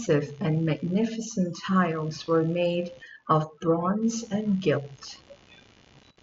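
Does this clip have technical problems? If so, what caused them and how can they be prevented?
Yes. Computer activity noise runs throughout as a ticking buzz at about 70 pulses per second, roughly 30 dB below the speech. Processor and graphics load changes shift the shared audio ground. Prevent it with a ground-loop isolator or a USB interface on its own power.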